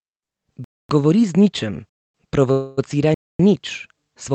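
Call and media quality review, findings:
Silent holes at 0.64–0.89 s, 1.89–2.14 s and 3.14–3.39 s, each 250 ms, recurring every 1.25 s. Gap between chunks: audio delivered in 1.0 s chunks with dead air inserted at every join, pointing to padding or late chunk start in the packaging or playback stage. Nothing removed, just interrupted at each boundary.

2.51–2.79 s: sound stretched into a fading buzz or hiss for 260 ms, never dropping to silence, then resuming where it stopped. Call audio freeze, likely jitter buffer run dry while packets were held in transit. The receiver filled the wait, so 260 ms of delay is added and no audio is missing.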